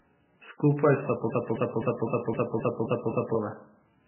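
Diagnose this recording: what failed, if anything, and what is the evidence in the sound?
Codec stage: the speech is dull throughout, with nothing above 3 kHz and a watery swirl. This is likely heavy MP3 compression, with damage consistent with about 8 kbps.

Playback or stream stage: from 1.3 to 3.35 s, a 0.26 s fragment repeats exactly eight times. It is a broken-record loop, likely from a stalled buffer, and the speech for that span is lost.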